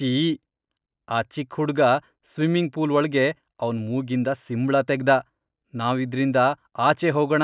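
No audible technical faults.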